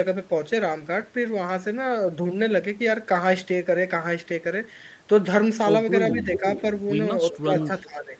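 Speech over a call, with nothing above 8 kHz, which fits an Opus wideband link at around 40 kbps, carries two kinds of fault late in the clip. Speech suppressed in double talk pulls the talker down in pieces at 6.13–6.43 s (a dip of about 5 dB), then at 7.41–7.69 s and 7.85–8.19 s (about 15 dB). The likely cause is an echo canceller that could not separate the near talker from loudspeaker echo and ducked everything. On a waveform these show as abrupt notches in the envelope, and on a spectrogram as short vertical gaps where the harmonics thin out. An echo leak overlaps them: a delayed copy of the voice, 417 ms late, appears at 6.17–6.66 s about 10 dB under the speech, and as fainter scraps about 20 dB down at 7.32–7.38 s and 7.6–7.81 s. On a spectrogram it looks like a dim, fragmented repeat of the harmonic pattern shifted about 0.4 s to the right.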